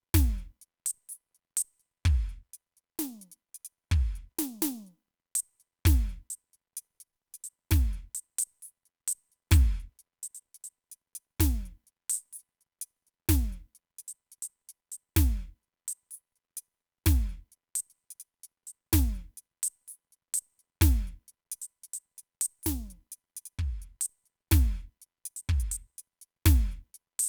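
The music carries no audible technical faults at any point in the recording.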